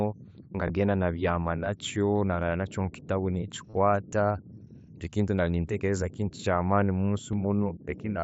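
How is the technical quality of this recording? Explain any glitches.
The recording has three brief dropouts from concealed Bluetooth headset packet loss, on speech carried over a wideband mSBC headset link that tops out at 8 kHz with light graininess. At 0.68 s a two-frame loss of about 15 ms, and at 7.32 s a single short loss, were patched by repeating recent waveform, so the single one at 7.32 s is nearly inaudible. Between 3.69 and 3.75 s, about 45 ms went missing in scattered gaps, the longest 30 ms. The repeated patching there produces a short buzzy tone at full level, with a slight warble as real audio resumes.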